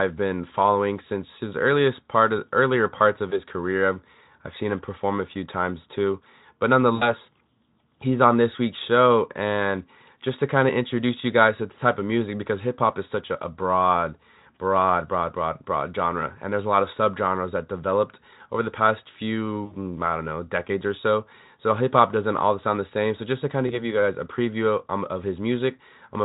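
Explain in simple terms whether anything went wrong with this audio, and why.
Small chunks of the call's data went missing in transit, a fault called VoIP packet loss concealed by the speech codec. The decoder filled each gap by stretching the last sound into a brief buzzy, fading blur. This happens at 3.29 to 3.41 s (after "of earlier parts of"), 6.95 to 7.14 s, 19.65 to 19.76 s (after "developed over the past"), and 23.67 to 23.82 s (before "you guys a preview"). The blurs at 6.95 s and 19.65 s fit about 60 ms of missing audio, and the other two about 20 ms.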